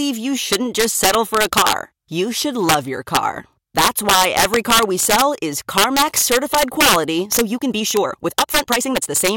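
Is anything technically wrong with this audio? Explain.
Yes, there are two faults. Integer overflow runs through the whole speech clip. The level is pushed about 4 dB past the integer limit, so roughly one percent of samples wrap to the opposite sign instead of being held. Each loud peak flips across the full range. It is heard as violent, sharp cracks on the loudest moments, harsher than ordinary clipping.

A time-stretched section runs from 7.21 s to the end at 9.37 s. The pace jumps to about 1.47 times normal while the pitch stays put. This is likely software squeezing the audio to fit a length by dropping short pieces. It sounds rushed.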